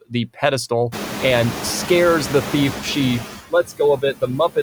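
A short speech recording in which the room noise climbs at about 1 s and then sits only about 12 dB below the talker. The noise suppressor artifacts run throughout: the suppressor removes only about 3 dB of that noise, and what remains is pulled down frame by frame as bands are lowered between phrases and let back up under them. This differs from plain room noise, which would stay steady. The speech cut by the noise suppressor comes between 3.5 and 3.8 s, with drops near 18 dB, and again between 3.97 and 4.57 s, with drops near 20 dB. In both places the suppressor takes quiet parts of the speech for noise, so those parts sound swallowed for a fraction of a second. Because the background is lowered along with the speech, this is not a fade or dropout in the signal itself.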